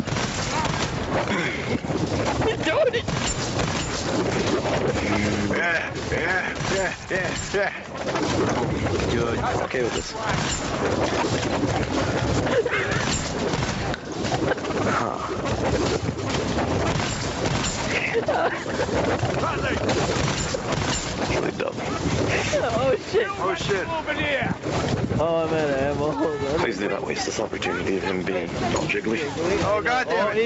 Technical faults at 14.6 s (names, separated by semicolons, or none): gain pumping